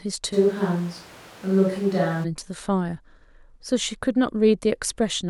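At 0.34 s the speech suddenly turns roomy and hollow, with the low end thinned out, and it snaps back to a close, full sound at 2.23 s. That's a switch to a distant microphone, most likely the close mic dropping out and a far-off one, say on the camera, covering the gap. The level hardly moves, but room noise comes up to roughly 25 dB below the speech.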